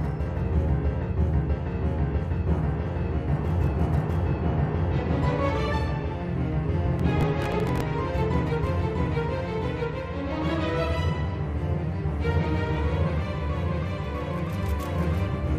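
Processor overload crackle runs from about 6.99 to 7.8 s. The processor fell behind on its very short buffers, a few milliseconds each, and missed a dozen or more of them again and again over that stretch. Each miss replayed a scrap of stale audio with hard edges, producing a gritty tearing crackle that stops once the load eases.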